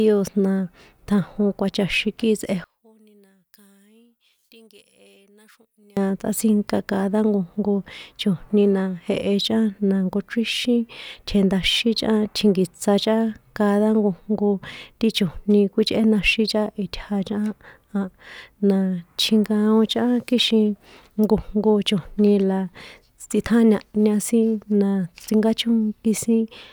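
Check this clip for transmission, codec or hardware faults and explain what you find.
One fault is present. From 2.64 to 5.97 s the speech drops by about 34 dB to a faint trace, likely one channel inverted, cancelling the shared centre content when summed to mono.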